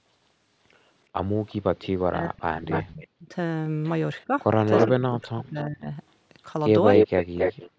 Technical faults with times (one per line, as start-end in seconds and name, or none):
1.49-1.87 echo leak
1.71-3.34 speech suppressed in double talk
2.71-3.07 echo leak
4.20-5.47 echo leak
4.25-4.32 speech suppressed in double talk
4.88-5.89 speech suppressed in double talk
6.93-7.71 echo leak